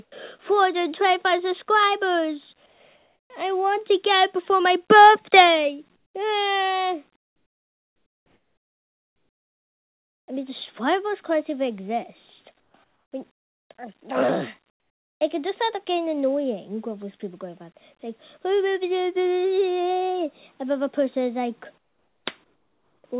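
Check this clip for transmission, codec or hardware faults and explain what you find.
One fault appears, seven times: comfort noise in place of the background. It occurs at 0.04 to 0.12, 2.66 to 3.3, 5.96 to 6.14, 7.16 to 10.28, 12.6 to 13.7, 14.7 to 15.2 and 21.78 to 23.04 s. In each gap the real background gives way to a steady, featureless hiss. The longest lasts about 3.1 s. Where it can be measured, the level drops by about 9 to 17 dB. The likely cause is discontinuous transmission. The sender stops sending in pauses, and the receiver fills them with synthetic noise. The audio also stops at 4 kHz, which fits a G.711 mu-law call path.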